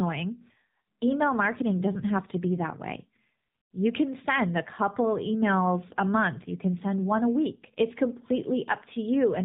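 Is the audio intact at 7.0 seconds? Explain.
No. The AMR narrowband mobile codec affects the whole clip, including 7.0 s. Nothing above 4 kHz survives, and the speech sounds buzzy and synthetic, which fits the 7.4 kbps mode.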